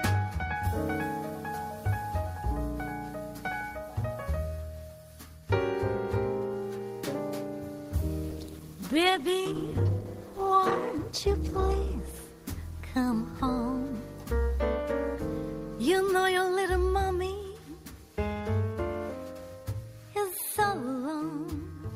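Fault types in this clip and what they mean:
Call bitrate drop: the connection's bandwidth estimate dipped, so the encoder got squeezed from 48 kbps down to 14 kbps, starting around 8.33 s and recovering by about 13.93 s. It sits at the bottom rate for roughly 4 seconds. At that budget the codec has to quantise everything much more coarsely and give up the top end, so the sound goes rough, watery and dull until the bits come back.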